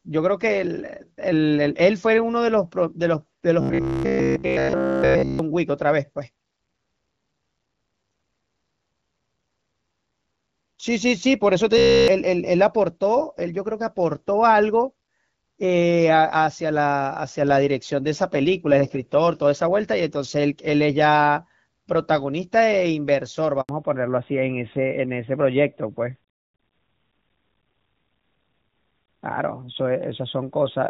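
From 3.61 to 5.39 s, and again from 11.78 to 12.08 s, the speech collapses into a rigid metallic buzz pinned at 66.8 Hz: robotic sound from repeated short buffers. The likely cause is that essentially all the audio there was a repeated snippet of about 15 ms, standing in for input that arrived too seldom. Unlike a dropout, the sound never goes silent. Instead a fixed-rate buzz is imposed while the rough shape of the words survives.

At 23.61 s comes a handover gap: 80 ms of silence while the call switched networks and no speech frames arrived. The sound fades within a few tens of milliseconds rather than stuttering, and what was said in that window is lost.

From 23.69 s to the end, the call falls back to narrowband, dropping from AMR-WB at 12.65 kbit/s to AMR-NB at 12.2 kbit/s. Nothing above 4 kHz remains, so the voice turns duller and rougher. The earlier wideband sound was light codec coloration, not missing treble.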